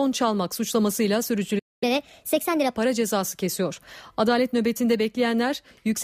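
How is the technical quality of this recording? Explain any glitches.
The recording has one brief interruption followed by a stretch that runs fast and high.

At 1.58 s, right after "çalmak suçlamasıyla", a playback stall silences the speech for about 0.23 s until 1.83 s. The player likely ran short of data or was blocked.

From 1.83 s to 2.75 s, ending before "cezası kesiyor", catch-up at higher speed plays the backlog at 1.25 times normal rate, lifting pitch roughly four semitones. Tempo and pitch rise together, which distinguishes it from a plain pitch shift.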